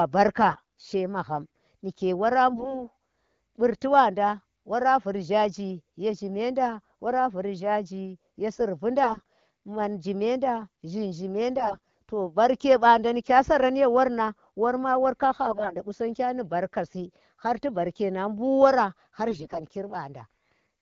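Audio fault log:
0.48–0.88 s, 2.51–2.84 s (just after "magham nike wora"), 9.04–9.26 s, 11.58–11.94 s (just before "to barke"), 15.45–15.82 s (just before "gu sangya ni barka") and 19.30–19.61 s: AMR bit errors. A weak link flipped a small share of the lightly protected bits in the AMR frames, roughly 7 to 15 percent. The frame checks passed, so the decoder used the corrupted data. Its excitation pulses landed in the wrong places and the fine pitch, gain and spectral values drifted. Pitch and loudness hold, but the speech turns hoarse, scratchy and gargly in each burst. The wideband HD Voice coding around these bursts sounds clear, which fits a rate near 12.65 kbit/s.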